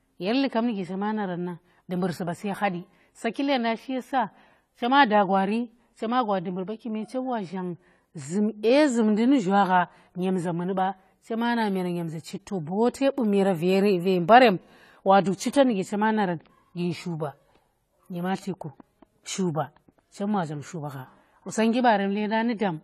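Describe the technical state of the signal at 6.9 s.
AAC compression is audible at 6.9 s and across the whole clip: the speech is dull and smeared, with nothing above 14.1 kHz and a fizzy, warbling edge on sibilants. This likely comes from AAC-LC coding at a low rate, consistent with about 32 kbps.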